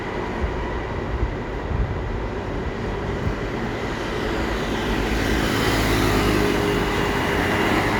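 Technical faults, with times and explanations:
No technical faults can be heard in this audio.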